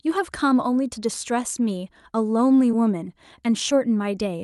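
At 2.71 to 2.75 s the speech shows a short concealed packet loss. About 20 ms of audio failed to reach the decoder in time, and the receiver covered part of the gap by extending the preceding sound for roughly 13 ms before crossfading back into the real signal. The result is a brief smear or wobble in the speech, heard over a call codec whose output tops out near 12 kHz, consistent with super-wideband Opus.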